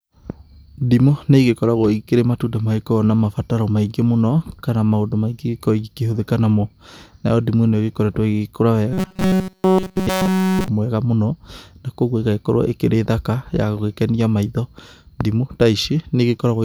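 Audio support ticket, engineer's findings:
Robotic sound from repeated short buffers, 8.93–10.68 s: speech goes to a rigid metallic buzz pinned at 188 Hz across the whole stretch. Likely underrun, with playback looping a chunk of roughly 5 ms while real audio gets skipped.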